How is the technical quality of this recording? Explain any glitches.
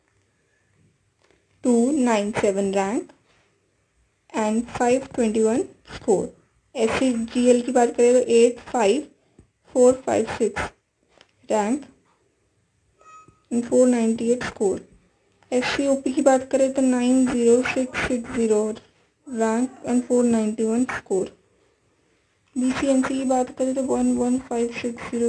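No technical glitches can be heard anywhere in the recording.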